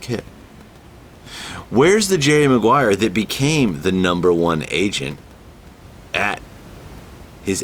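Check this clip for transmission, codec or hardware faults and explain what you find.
No transmission, codec or hardware faults turn up in this speech clip, and the room noise sitting about 24 dB below the speech belongs to the recording itself.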